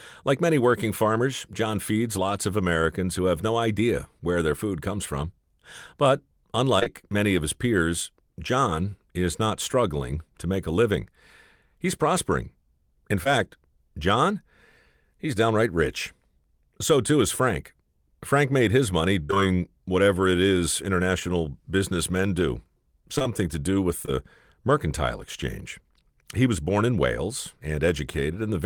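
At 6.79 s and again from 6.83 to 6.88 s, two back-to-back short concealed packet losses each leave a gap of about 20 ms, and at 13.24 s a third does the same. The receiver extends the preceding sound across each hole, leaving a single brief smear or wobble rather than a run of damage.

From 19.23 to 19.49 s, repeated packet loss produces robotic sound. Three holes, the longest about 59 ms, mean more than half that span is patched audio, so it turns choppy. From 23.18 to 24.09 s, four shorter gaps of no more than 23 ms recur across nearly a second, giving a sparser stutter. Unlike isolated concealment, these holes keep arriving before the sound recovers.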